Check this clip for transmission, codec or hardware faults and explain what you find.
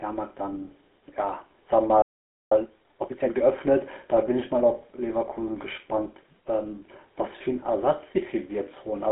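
Three faults are present: codec damage throughout, a half-second gap in playback, and a hurried stretch right after it.

GSM full-rate codec, throughout: the speech is confined to roughly 250 Hz to 3.5 kHz, with nothing above 3.5 kHz, and carries a plainly audible buzzy, gravelly roughness, which fits 13 kbit/s GSM full rate. The codec rebuilds the voice from a vocal-tract model driven by coarse, regularly spaced pulses. That grainy buzz is what separates it from simple telephone band-limiting, which only muffles.

Playback stall, 2.02 to 2.52 s: the speech cuts to silence for about 0.49 s, then resumes. The likely cause is the player running short of data or being blocked. Unlike packet loss, there is no concealment noise or smeared fill, only clean silence mid-flow.

Time-compressed catch-up, 2.52 to 3.50 s: after the gap the speech runs about 1.5 times faster while keeping its normal pitch. 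The player works off its backlog by dropping small slices and cross-fading the joins. Plain fast playback would raise the pitch instead.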